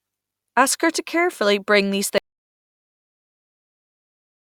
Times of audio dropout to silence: 2.18-4.41

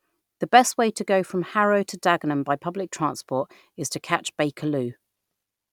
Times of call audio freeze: none

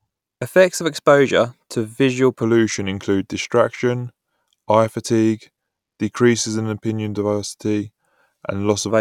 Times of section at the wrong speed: 2.42-8.91

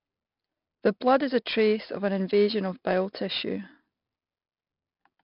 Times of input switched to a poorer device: none

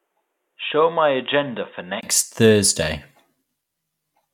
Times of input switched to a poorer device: 0.00-2.03

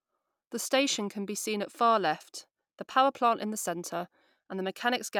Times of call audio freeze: none

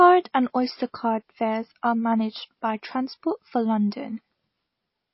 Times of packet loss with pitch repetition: none

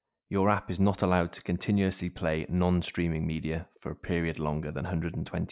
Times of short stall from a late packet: none

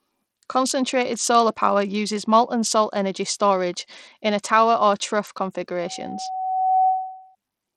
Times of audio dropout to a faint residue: none

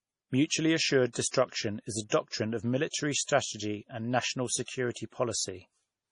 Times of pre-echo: 2.88-2.94, 3.23-3.28, 4.92-4.96

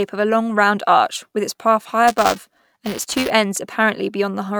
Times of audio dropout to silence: none

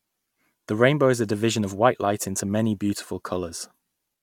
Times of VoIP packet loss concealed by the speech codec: none

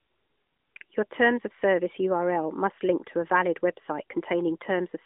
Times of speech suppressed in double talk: none

